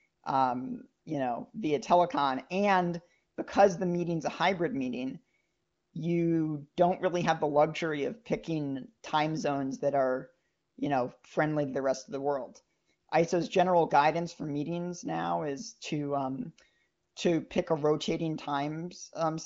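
No audible faults in this speech.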